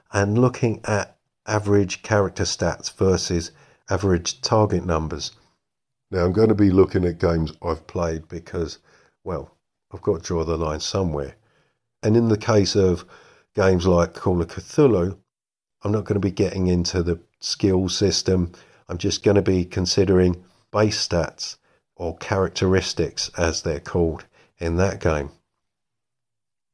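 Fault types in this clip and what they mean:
Wrong sample rate: From 5.84 to 7.84 s, the speech plays at 0.92 times speed and about 1.5 semitones lower. This fits 24 kHz audio played at 22 kHz.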